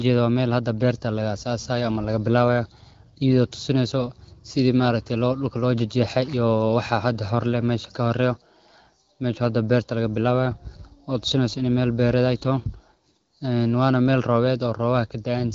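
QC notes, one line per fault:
No faults heard in this speech.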